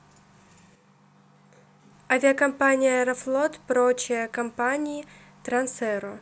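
At 0.76 s the speech abruptly turns roomy and hollow, with thinner bass, a drop of roughly 5 dB in level and a faint bed of room noise sitting far below the voice, around 40 dB down. At 1.92 s it snaps back just as suddenly to its full, close sound. This is a switch to a distant microphone: the close microphone's signal most likely dropped out, leaving only a pickup farther away that captures more room and less low end.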